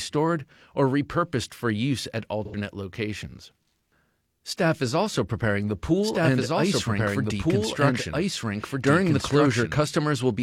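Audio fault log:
2.45–2.56 s, AAC frame loss with concealment: after "repurposed for use at", about 85 ms of coded audio, which fits two lost AAC frames, went missing, and the decoder rebuilt the gap from the last good spectrum, leaving a short smeared, noisy, phasey patch instead of clean sound.
6.03–9.79 s, doubled audio track: after "is also preparing the", a second full-band copy of the audio runs about 1.5 s behind the original at roughly equal level, likely from a slower capture path or an out-of-step edit, starting and stopping abruptly with no decay or room colour.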